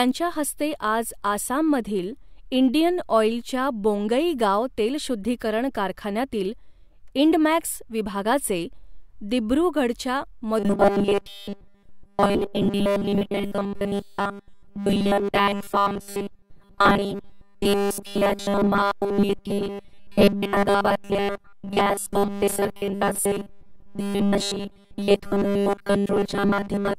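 From 10.59 s to the end, the speech turns into robotic sound from repeated short buffers: a rigid, metallic buzz at 200 Hz that only loosely tracks the words. That's likely a 5 ms chunk being replayed essentially nonstop while fresh audio gets dropped.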